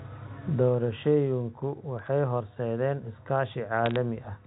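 Bit errors on a digital phone line flip bits in the G.711 stream from 1.99 to 2.08 s and again, more densely, from 3.86 to 3.96 s. Each hit on a high-order bit, or on the sign of a loud sample, throws one sample far off, so brief sharp crackle sits over the unchanged speech.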